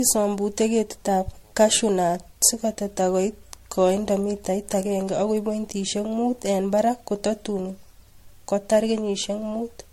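Generation loss runs throughout this speech clip: the sound is swirly, smeared and hollow, attacks are blurred, and nothing remains above 16.5 kHz. It likely comes from about ten successive MP3 passes near 65 kbit/s, each requantising on a shifted frame grid.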